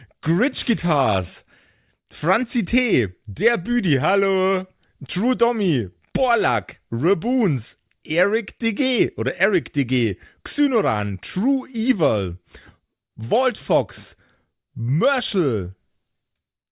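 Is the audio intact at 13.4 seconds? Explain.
Yes, at 13.4 seconds the speech plays through intact, with no audible fault at that moment.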